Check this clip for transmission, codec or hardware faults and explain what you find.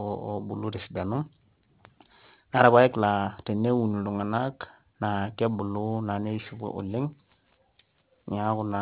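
There's one fault, running the whole way through this speech: aliasing. High content folds back around 4 kHz, points to an unfiltered drop to 8 kHz, and leaves gritty, metallic sibilants roughly 25 dB under the speech.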